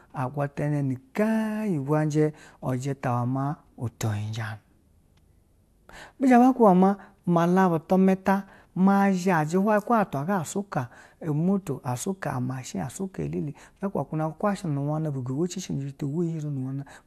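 Nothing goes wrong anywhere in this recording of speech, so there's no technical fault to point to.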